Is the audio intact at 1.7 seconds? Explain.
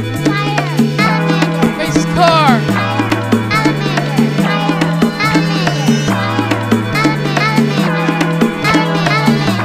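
No, at 1.66 s a 5 ms block of digital silence, where the audio briefly cut out with no fade, causes a tick. The waveform shows a flat gap.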